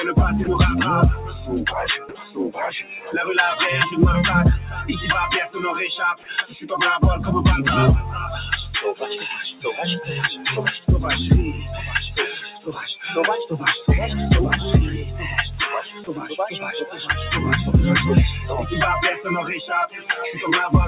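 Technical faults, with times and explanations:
Throughout: noise suppressor applied to music or sounds. A speech-tuned suppressor treats sustained content as noise, so level swings by around 10 dB. The waveform shows a pumping envelope, with held energy collapsing after each attack.
0.44 to 0.47 s: sound dropped by the voice detector. A 30 ms stretch was likely misjudged as background and replaced by comfort noise, showing as a flat, featureless band.
1.98 to 2.21 s, 2.83 to 3.1 s, 12.34 to 13.05 s, 15.81 to 16.36 s, 16.85 to 17.08 s and 19.88 to 20.13 s: sound cut by the noise suppressor. Steady portions sink by about 6 to 11 dB and tails shorten, showing as dimmed spectrogram patches below the 4 kHz G.711 ceiling.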